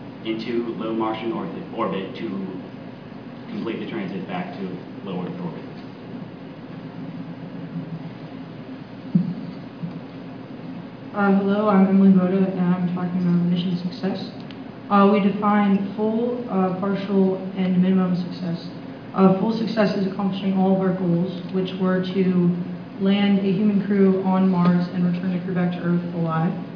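No technical faults are audible.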